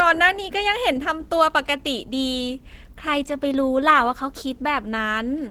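Speech, heavily squeezed throughout by what is likely low-rate Opus compression, the muffled, hoarse character pointing to the encoder's hybrid speech mode at a rate around 16 kbps. The top end still reaches about 20.2 kHz, yet the coding damage is plainly audible across the clip.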